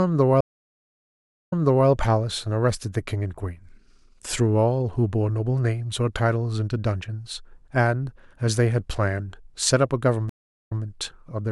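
At 0.41 s and again at 10.29 s, a stream reconnect breaks the speech: about 1.11 s and then 0.40 s of silence, after which a fresh decoder resumes 0.37 s and 0.13 s earlier, replaying material already heard. That repetition separates it from a plain dropout.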